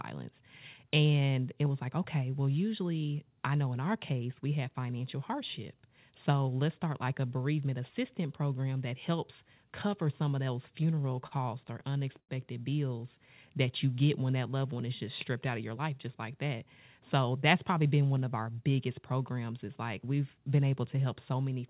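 From 10.76 to 12.31 s, between "cover some of those" and "bills that you get", the speech shows repeated stalls (stutter). Ten times the jitter buffer ran dry and the receiver stretched the last sound, about 203 ms in total, the longest gap 91 ms. Nothing is lost, but the phrase drags and catches.

Between 15.49 and 16.08 s, after "one is just stripped" and before "like that", a jitter buffer speed-up cuts roughly 50 ms of short pitch-period slices to reduce excess delay. The speech runs about 8% fast at unchanged pitch and sounds hurried, all within the call path's 4 kHz band.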